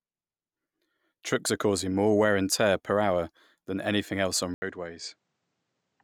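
At 4.54 s the speech cuts out for 80 ms, then returns duller and a little quieter, with nothing above 9 kHz, a faint new background noise well below the speech, and this narrower sound continuing to the end. The likely cause is the input switched to a poorer device partway through recording.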